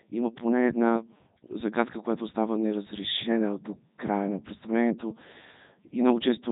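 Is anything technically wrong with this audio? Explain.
Yes. The speech runs through a Codec 2 vocoder for the whole clip. The decoder never receives the original waveform. It gets only pitch, voicing, energy and a rough spectral envelope, and rebuilds the speech from sine waves. The result sounds heavily robotic and buzzy, with nothing above 3.8 kHz, which fits Codec 2's 3.2 kbit/s mode. Plain telephone band-limiting would muffle the sound but keep its natural texture. Here the texture itself is synthetic.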